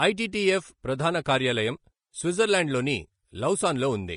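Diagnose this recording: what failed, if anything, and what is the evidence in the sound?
The fault sits at the codec stage and runs through the whole speech clip: low-bitrate audio saved at a high bitrate. Content reaches 20.8 kHz, as a high-bitrate MP3 would, yet the coarse artefacts of an earlier encode remain, likely a Vorbis pass near 34 kbit/s. That survival of first-pass damage under a wide spectrum separates it from a plain low-bitrate file.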